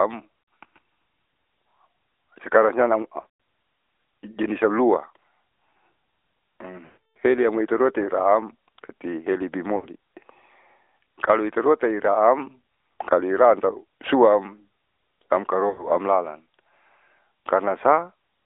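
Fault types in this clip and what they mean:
AMR narrowband mobile codec: The speech passed through a narrowband mobile speech coder that models the vocal tract and excites it with a few pulses per subframe. The rate used fits a mode around 10 kbps. The whole clip sits in a telephone band of about 300 Hz to 3.6 kHz, with nothing above it. The coding damage is plainly audible as a buzzy, somewhat synthetic voice quality.
lost AMR speech frames: Corrupted frames were discarded, and the decoder filled the gaps by repeating the last good pitch and vocal tract settings at falling gain. Short dropouts at 0.62 s, at 9.76 s after "seliamoi iteruataam tati", and at 15.7 s give brief dips or warbles. At 3.2 s, after "sekarang siam", about 180 ms of loss smears into a stretched fade. The longest gap, 300 ms from 6.86 to 7.17 s, fades to silence before "seliamoi iteruataam tati".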